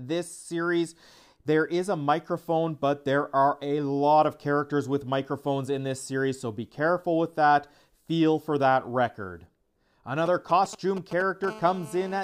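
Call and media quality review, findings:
GSM signalling bursts, 10.26–11.46 s: galloping ticks and brief 217 Hz buzz groups, roughly 15 dB below signal. Nearby 2G handset's RF bursts rectified in audio path. Spectrogram shows clustered vertical stripes.

GSM phone buzz, 11.47–12.19 s: steady raspy 217 Hz buzz, about 19 dB below signal. Handset in call, RF pulses demodulated by circuitry. Spectrogram shows a dense harmonic comb at 217 Hz spacing.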